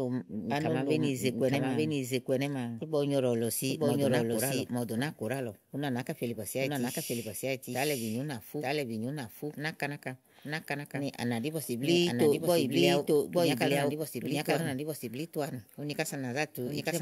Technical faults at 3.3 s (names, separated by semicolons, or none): doubled audio track